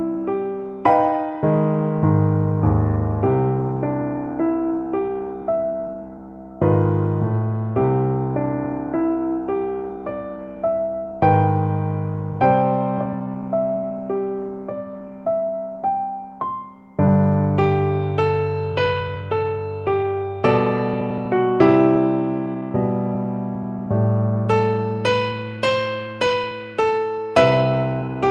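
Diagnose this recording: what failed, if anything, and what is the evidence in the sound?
The failure sits in the network and jitter-buffer stage: clock drift between sender and receiver. The sender's clock runs roughly four percent fast, so packets arrive quicker than the receiver plays them and its buffer keeps filling. That steady surplus persists through the whole recording, so the receiver must keep discarding audio to hold latency down. The waveform shows no single dropout, only a chain of small timing irregularities.

The audible result is repeated timing corrections, from 0.15 to 1.38 s at about 104% speed and again from 4.02 to 28.24 s at about 105%. Each time, the receiver cuts a short piece to catch up, all edits in the same direction but unevenly spaced, heard as faint hiccups and a slightly hurried, unsteady tempo. A spectrogram shows thin vertical seams where partials jump abruptly, and events crowd slightly closer than their natural spacing.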